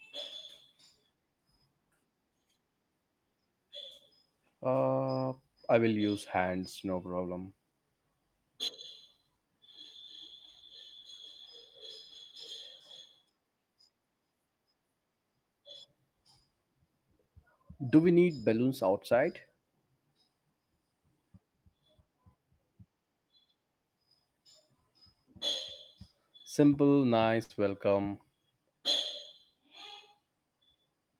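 At 27.43 s a burst of packet loss leaves the receiver without audio for roughly 80 ms, so it extends the last speech sound and fades it out for about 60 ms. The speech then resumes at 27.52 s with about 60 ms missing.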